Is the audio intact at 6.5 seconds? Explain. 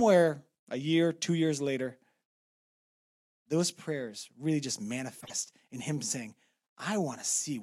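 Yes, at 6.5 seconds the speech plays through intact, with no dropout, click, distortion or other fault to be heard at that point.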